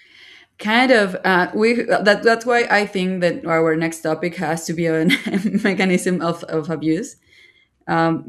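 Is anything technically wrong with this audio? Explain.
No, nothing technically wrong can be heard in this audio. The speech carries no audible defect from recording, processing or playback.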